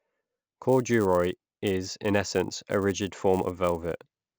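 Resampler restarted on every block, from 0.61 s to the end: each 10 ms block was converted from 16 kHz to 48 kHz in isolation, so every block edge lacks its true neighbouring samples. The resulting edge errors form a steady 100 Hz buzz riding under the speech.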